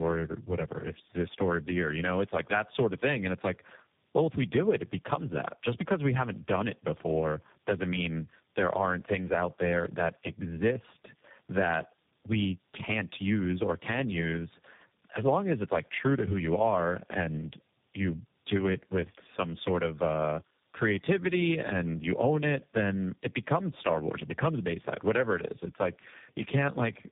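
Across the whole recording, the speech carries tandem speech coding: it passed through three speech codecs in a row, ending in G.729A, each re-encoding the previous one's degraded output. The result is rough, muffled and warbly, with nothing above 3.7 kHz.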